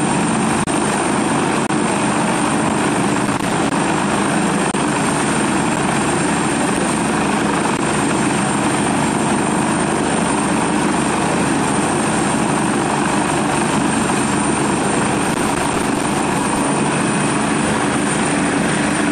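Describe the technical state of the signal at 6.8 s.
At 6.77 s there is a gap between stream segments: the timestamps of two adjacent segments leave roughly 6 ms uncovered, and the player fills it with silence. It sounds like a brief hard-edged dropout, and nothing is lost. The waveform shows a flat line with abrupt edges. The spectrogram shows a thin blank vertical stripe.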